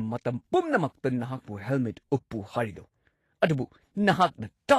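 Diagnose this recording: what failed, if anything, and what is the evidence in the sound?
The failure is at the codec stage, and it runs through the whole speech clip. The audio has no content above 14.2 kHz, and plainly audible coding damage sits in the upper band: treble detail turns into grainy, noise-like texture and consonant onsets lose their sharpness. The likely cause is Vorbis compression at low quality, which fits a bitrate around 35 kbps. Too few bits force a lowered cut-off and coarse quantisation of the residue above the spectral floor.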